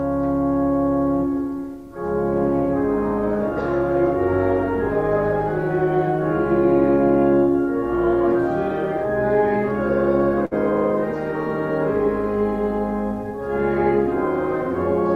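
At 10.45 s a burst of packet loss interrupts the audio until about 10.54 s. Several consecutive packets failed to arrive in time, and the receiver concealed the gap by extending the last decoded sound for roughly 58 ms while lowering its level, giving a brief held, fading tail instead of new material. Playback then resumes further along, so about 60 ms of the original audio is skipped.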